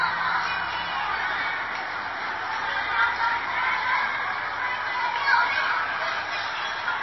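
MP3 compression is audible throughout the clip: nothing survives above 5.8 kHz, and the remaining band sounds watery and swirly. This likely comes from an encoder starved of bits, fitting a rate near 24 kbps, which truncates treble and toggles weak frequency components between frames.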